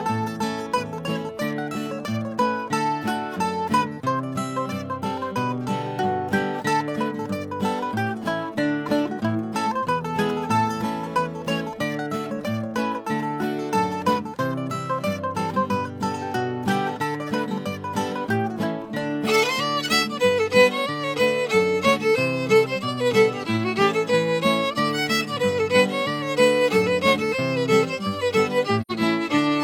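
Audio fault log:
28.81–28.92 s, AAC frame loss with muting: the decoder zeroed the missing spectrum, so sound fades out and back in over roughly 85 ms, consistent with two lost frames, leaving a soft-edged gap.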